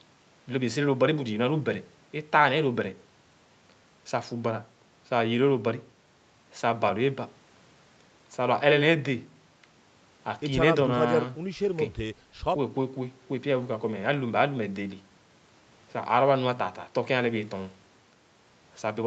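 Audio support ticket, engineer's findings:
No faults found: band-limit at 8 kHz and coding texture fit normal call microphone processing and an Opus-type WebRTC call path at roughly 32 kbps.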